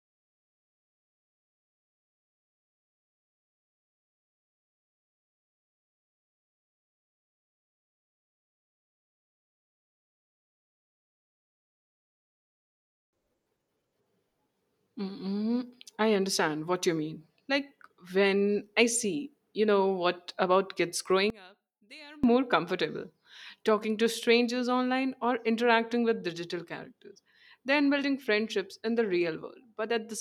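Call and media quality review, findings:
One channel inverted, 21.30–22.24 s, right after "know what about kids": speech drops about 25 dB to a faint residue in the mono sum. Likely one stereo channel briefly polarity-flipped, so common centre content cancels and only the inter-channel difference remains.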